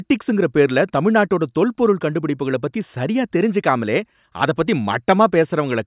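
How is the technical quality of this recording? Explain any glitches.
No technical faults are audible.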